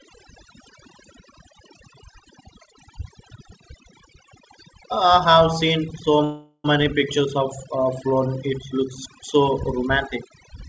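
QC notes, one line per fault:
Throughout, overdone noise removal: the noise reduction is pushed too hard, clamping down any band near its noise estimate, so the background drops and breaks up into twinkly specks, and the quieter parts of the speech get taken along.
6.24 to 6.66 s, call audio freeze: right after "have seen so" the sound hangs as a fading buzz or hiss for about 0.4 s, then about 20 ms of silence before it picks up where it left off. Likely the jitter buffer ran dry while packets were held up, so a gap was inserted and nothing was lost.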